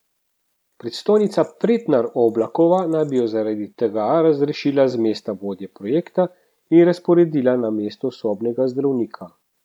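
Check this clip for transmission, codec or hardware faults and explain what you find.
Nothing audible points to a transmission, codec or hardware fault anywhere in this speech recording.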